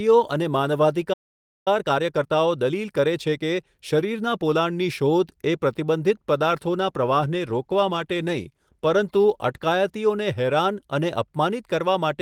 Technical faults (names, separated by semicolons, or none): playback stall; time-compressed catch-up; call bitrate drop